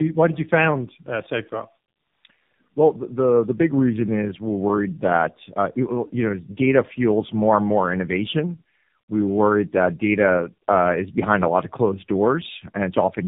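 From the first second to the last, the speech carries tandem speech coding. It sounds like it passed through two low-rate speech codecs in a row, with a plain G.711-style hop between them. The roughness and warble fit a G.729A stage feeding an AMR-NB stage around 7.4 kbit/s, each coder re-quantising the artefacts the last one left. Nothing reaches above 3.8 kHz, so everything sounds muffled, grainy and watery.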